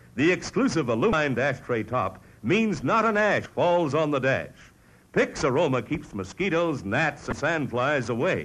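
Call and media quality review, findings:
Three brief glitches in the audio, each about 30 ms, at 1.10 s, 3.43 s and 7.29 s. Damaged data in a compressed stream: corrupted bytes made the decoder misread or drop frames, lose sync and hunt for the next frame header.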